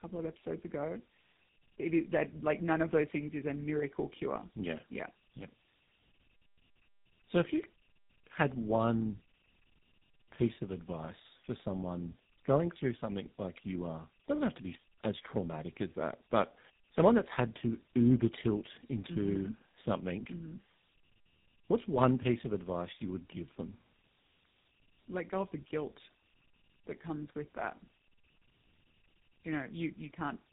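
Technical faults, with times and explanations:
Throughout, tandem speech coding: speech re-encoded by two speech coders in a row, fitting G.729A then GSM full rate, compounding roughness and warble, with nothing above 3.8 kHz.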